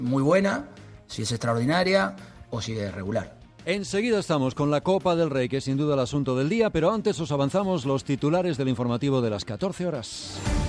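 No technical faults can be heard anywhere in the audio, which remains steady and intact throughout.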